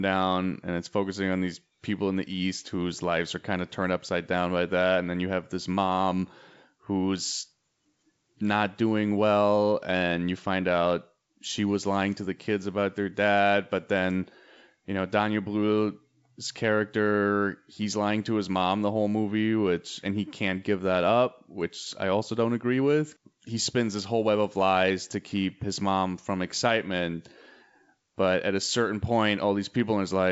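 The speech carries no audible technical faults.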